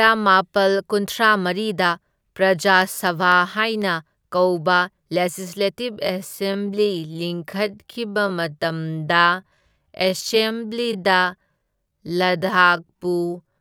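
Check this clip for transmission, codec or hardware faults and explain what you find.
Two faults are audible in this speech clip: a run of regular ticks, then a slowed, dragging stretch running to the end.

From 2.82 to 5.07 s, right after "ꯀꯨꯟꯊ꯭ꯔꯥꯃꯔꯤꯗ ꯄ꯭ꯔꯖꯥ", clicks recur every 0.25 s, around ten in all. These are periodic USB or driver dropouts: something repeatedly stalls the audio path, and each time a fraction of a millisecond of signal is replaced with silence.

From 5.85 s to the end, the pace drops to about 0.645 times normal while the pitch holds steady, giving a drawn-out, dragging delivery. This is likely a time-stretched section, where software lengthened the audio by repeating short slices rather than resampling it.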